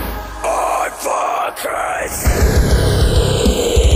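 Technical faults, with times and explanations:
throughout, channels drifting apart: the channels' clocks differ by about 100 ppm, so their offset slides toward roughly 0.3 ms, sweeping comb notches into slow flanging.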